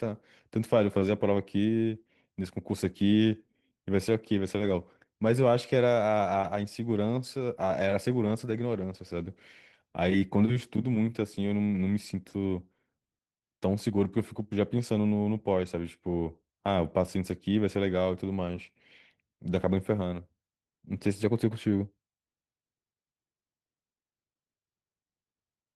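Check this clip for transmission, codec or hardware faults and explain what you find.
One codec fault runs through the whole speech clip: Opus voice compression. The coder splits the band, linear-prediction coding below 8 kHz and transform coding above. The plainly audible damage points to about 16 kbps in 20 ms frames. The coarsely coded excitation makes the speech sound hoarse and slightly robotic.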